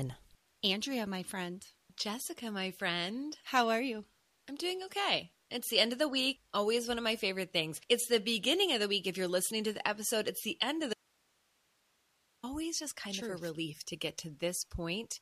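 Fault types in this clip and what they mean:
Audio dropout to a faint residue: at 10.93 s the sound snaps out for 1.5 s, leaving only hiss about 40 dB below it, likely a lost input while the path stayed live. A pause or fade would taper, not cut abruptly mid-flow.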